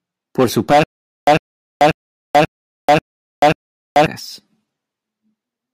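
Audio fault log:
0.84–4.06 s, stutter with silent gaps: playback likely stalled, replaying a 100 ms burst six times, each followed by 437 ms of digital silence.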